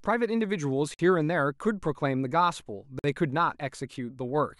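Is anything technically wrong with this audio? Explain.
Yes. The speech drops out twice, at 0.94 s and again at 2.99 s, each time into a hard-edged silence lasting 50 ms before carrying on exactly where it stopped. This is a gap between chunks: the audio was handled in 2-second pieces, and silence was inserted at each join, so nothing is lost but the flow is broken. The identical length and the regular 2-second spacing give the holes their clipped, mechanical feel.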